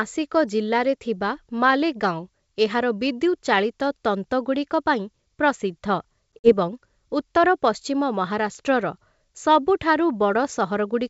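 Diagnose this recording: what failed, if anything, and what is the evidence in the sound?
Network stage: packet loss on an ADPCM call. Between 6.36 and 6.52 s the speech drops out in hard-edged silent gaps. About 60 ms is lost, spread over roughly 120 ms, with the longest run 50 ms. The G.722 decoder's adaptive predictor and step size then lose step with the sender's.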